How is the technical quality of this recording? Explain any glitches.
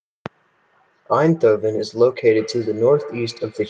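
One fault affects the speech. Feedback echo between two devices, from 2.27 s to the end: another device replays this microphone's audio, which is picked up again, giving thin, ringing repeats roughly every tenth of a second, about 17 dB down.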